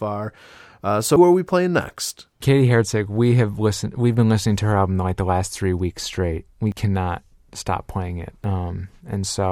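At 1.16 s, right before "are we playing next", the speech jumps as about a tenth of a second vanishes; the same happens at 6.72 s before "cannot stop playing it" and at 8.44 s after it, each losing roughly 40 ms. A dropped buffer (overrun) is the likely cause.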